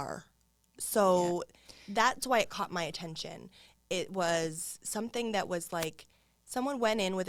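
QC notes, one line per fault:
5.78–5.87 s, wireless microphone noise hit: the FM radio link fades briefly after "was something that was", so receiver noise surges into a short burst of static.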